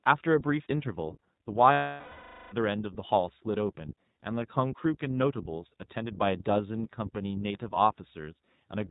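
Throughout, the speech carries the iLBC codec: a narrowband band-limit with nothing above 4 kHz, and a plainly audible rough, slightly synthetic texture. Each short frame's excitation is coded independently, and the sound fits the 20 ms, 15.2 kbps mode.

From 1.72 to 2.54 s, lost iLBC frames leave roughly 0.8 s of concealment. The decoder repeats the last pitch cycle mixed with noise, so the gap sounds like a held, buzzy, breathy vowel that fades, before normal speech resumes almost immediately.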